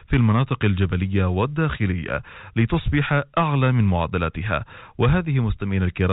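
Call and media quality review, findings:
Nothing to flag on this speech clip; it sits in the usual narrow telephone band of G.711 A-law at 64 kbps, topping out around 4 kHz.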